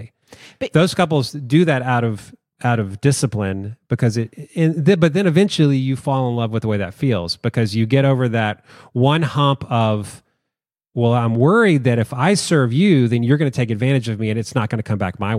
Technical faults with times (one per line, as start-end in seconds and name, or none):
none